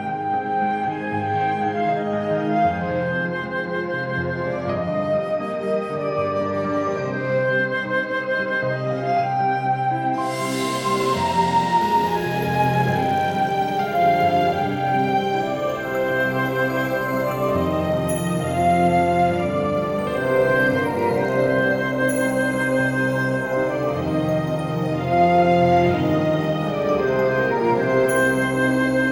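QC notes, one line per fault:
Nothing to flag here; I listened all the way and didn't catch a single problem worth a line.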